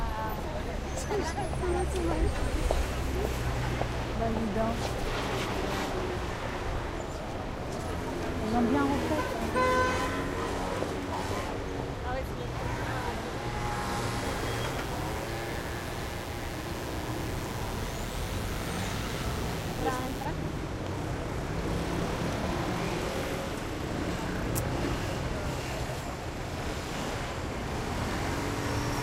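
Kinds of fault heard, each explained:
Mains buzz: a steady, raspy buzz from 14.24 to 20.25 s, sitting roughly 15 dB below the sound. Switching spikes twice per 60 Hz cycle put harmonics up into the kilohertz range, shown as evenly spaced horizontal lines on a spectrogram and a sharp repeating ripple on the waveform.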